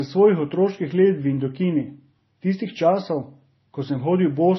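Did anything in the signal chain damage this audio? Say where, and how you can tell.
Yes, at the codec stage, and it runs through the whole speech clip. Nothing reaches above about 5.9 kHz, and the low-bitrate texture carries two kinds of artefact layered together. That points to transcoding between lossy codecs, most likely a low-rate MP3 at around 24 kbit/s re-encoded to Vorbis near 26 kbit/s. The second encoder wastes its small bit budget on the first one's debris, adds its own, and the lowest band limit in the chain stays.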